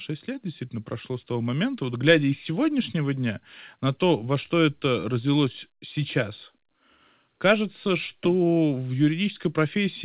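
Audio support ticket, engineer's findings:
Nothing stood out on listening to this speech clip through the call path, beyond the expected telephone-band sound with no content above 4 kHz.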